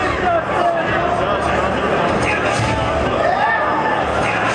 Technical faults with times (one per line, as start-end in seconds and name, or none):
none